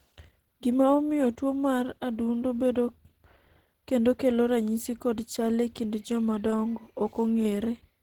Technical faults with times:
0.00-8.02 Opus compression

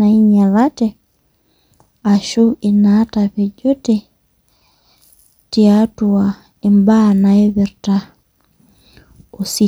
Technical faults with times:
none

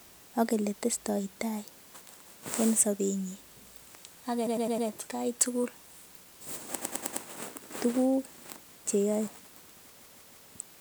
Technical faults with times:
4.46-4.87 repeated frames
6.81-7.23 repeated frames
9.99-10.46 repeated frames

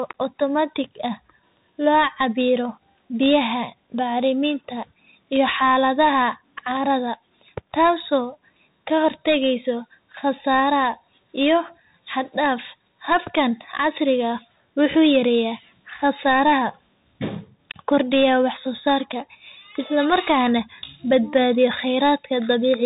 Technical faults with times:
0.00-22.86 Bluetooth CVSD headset codec

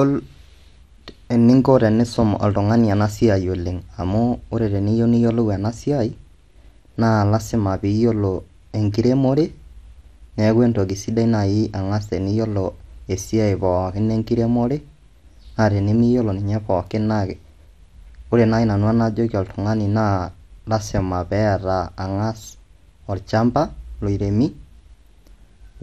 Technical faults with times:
0.00-25.82 MP2 compression

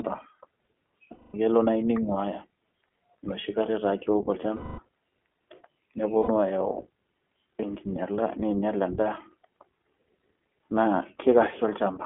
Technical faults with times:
0.00-12.06 iLBC codec
1.11-1.36 lost iLBC frames
4.56-4.79 lost iLBC frames
6.18-6.30 lost iLBC frames

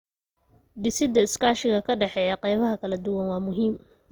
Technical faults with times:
0.00-4.11 Opus compression

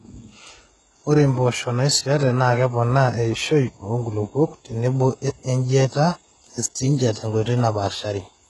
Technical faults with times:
0.00-8.50 HE-AAC compression

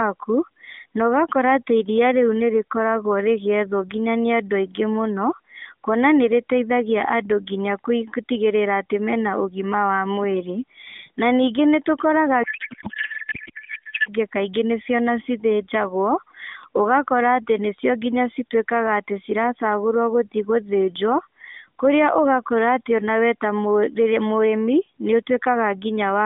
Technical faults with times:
12.44-14.12 codec payload misread

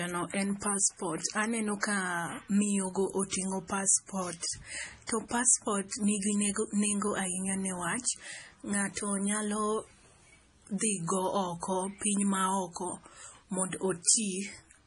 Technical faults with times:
0.00-14.86 MP3 compression

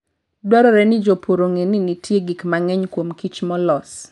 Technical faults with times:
none

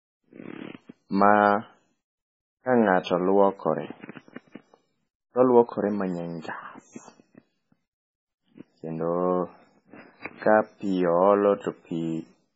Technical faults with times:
0.00-12.56 MP3 compression

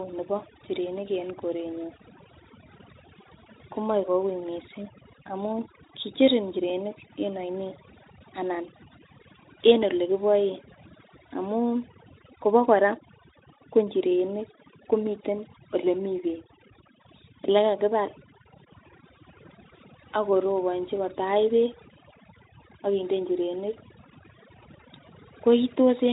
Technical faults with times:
0.00-26.12 overdone noise removal

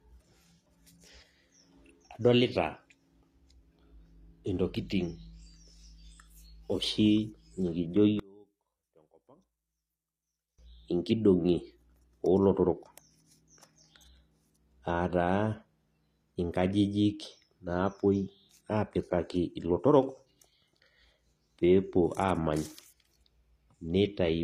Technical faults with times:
0.00-24.44 HE-AAC compression
8.19-10.59 one channel inverted

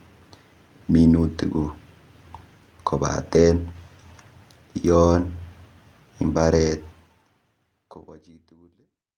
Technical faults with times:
3.33-3.47 lost packet rebuilt from error correction
5.17-5.19 lost packet rebuilt from error correction

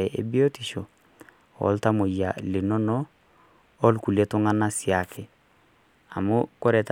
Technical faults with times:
none

